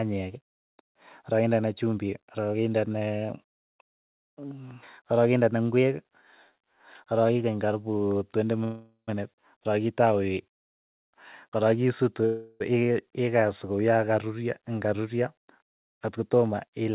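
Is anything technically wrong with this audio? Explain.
Yes. Two call audio freezes hold up the speech, at 8.64 to 9.10 s and 12.26 to 12.62 s. The likely cause is delayed packets draining the jitter buffer, so the last sound is stretched into a fading buzz. The first freeze decays to about 110 ms of silence, and the second never goes quiet. Speech then resumes where it stopped, adding 435 ms and 346 ms of delay. Unlike a packet-loss dropout, nothing is skipped.

From 15.22 to 16.90 s, a jitter buffer speed-up makes the speech run about 6% fast as pitch-period slices are cut, removing roughly a tenth of a second. Because the pitch stays unchanged, this is not a resampling error.

The G.711 call path is audible as its usual coding noise and the absence of anything above 4 kHz.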